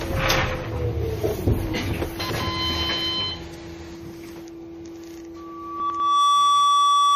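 MP3 compression runs through the whole clip: the sound has a watery, swirling quality, with nothing above 15.1 kHz. That is likely a low-bitrate MP3 encode, around 40 kbps, starved of bits, cutting the treble and switching weak frequency lines on and off between frames.

Chunks out of order occur from 2.2 to 2.4 s: a 100 ms chunk plays one slot late, after the chunk that should follow it. Nothing is missing, but the sequence jumbles briefly across the hard joins between the swapped pieces.

A loudspeaker feedback squeal begins at 5.36 s and lasts to the end. A 1.2 kHz tone swells over roughly a second to about 10 dB above the sound, because the microphone-to-speaker loop has gain above one at that frequency.

The same chunks-out-of-order fault returns from 5.8 to 6.0 s, under the squeal. Another 100 ms chunk arrives one place late, giving a second garbled moment.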